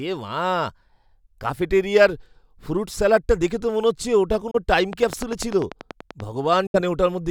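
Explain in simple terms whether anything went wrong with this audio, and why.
Yes, two kinds of problem can be heard. The speech cuts out briefly twice. At 4.51 s it vanishes for about 28 ms, and at 6.67 s for about 70 ms. Then it carries on as if it had kept playing. This is likely a Bluetooth dropout, where wireless data arrives too late and is thrown away.

There is also a train of clicks from 4.93 to 6.21 s. About fifteen sharp ticks come evenly, roughly ten each second. They sit on top of the speech and stand out clearly. Each click sounds alike, so something is likely injecting the same pulse over and over.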